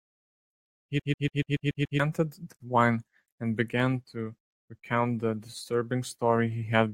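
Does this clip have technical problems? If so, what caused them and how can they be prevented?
Yes. From 1.00 to 2.00 s the speech is caught in a CD stuck on one turn. A scratch keeps throwing the laser back one track at the same point of each rotation. So the same 143 ms slice plays seven times in a row. Each jump leaves a brief mute. The result is a fast, even stutter. To prevent it, rip with an error-correcting ripper from a clean, undamaged disc.

At 2.56 s a 43 ms gap at a join of encoded pieces breaks the speech. The silence has smeared edges, and the sound then resumes where it left off. Each encoder run added start-up delay and padded its final frame. Both were kept when the pieces were joined. The spacing fits pieces encoded in 2 s lengths. To prevent it, encode the audio as one continuous stream, or trim the delay and padding before joining.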